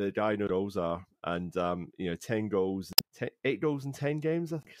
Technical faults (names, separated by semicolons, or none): damaged data in a compressed stream